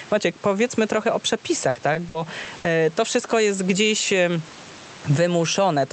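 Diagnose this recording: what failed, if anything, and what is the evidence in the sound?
The level swings by around 10 dB throughout, pulling loud and soft parts closer together, which flattens the speech's dynamics. This is gain pumping at the call-processing stage, likely from input gain set too high with a fast limiter pulling it down on each peak.

From 1.69 to 2.76 s, after "powiedzmy trochę o" and before "to wszystko jest gdzieś", the speech turns choppy, with five short holes up to 60 ms. This is repeated packet loss on the network: late or lost packets were patched by extending the previous sound, covering about 22% of that stretch.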